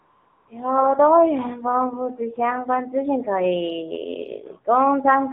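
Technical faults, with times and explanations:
throughout: AMR narrowband mobile codec. The audio only spans about 150 Hz to 3.5 kHz, so nothing bright survives. The buzzy, synthetic edge is plainly audible, which fits a low bitrate around 7.4 kbps where the vocal-tract model gets very few pulses per subframe.
0.00 to 0.48 s: AMR comfort noise. The opening 475 ms has no real signal, just a smooth, steady hiss. The phone treated this stretch as silence and stopped sending speech frames, so the receiver filled it with generated noise from a rough level-and-spectrum sketch.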